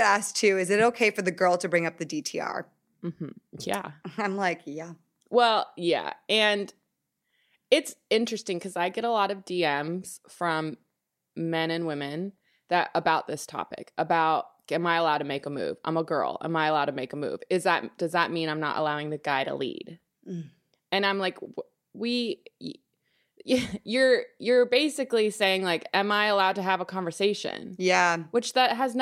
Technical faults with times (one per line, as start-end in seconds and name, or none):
none